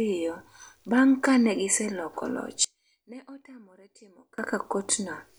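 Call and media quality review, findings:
One channel inverted, 2.64 to 4.38 s, starting right after "ka ne giseloko loch": speech drops by about 24 dB to a thin residue. Likely polarity flip on one stereo leg; the shared centred content cancels when summed to mono, leaving only the channel difference.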